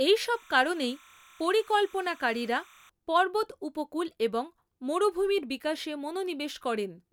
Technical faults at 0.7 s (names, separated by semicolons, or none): timecode bleed